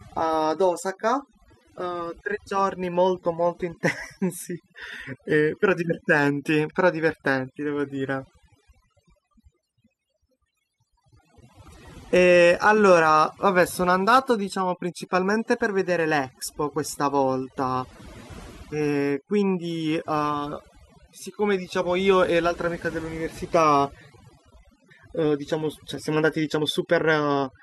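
Overdone noise removal runs throughout: an over-aggressive noise reducer mutes frequency bands near its noise estimate, leaving twinkling specks in near-silence and taking quiet parts of the voice with them.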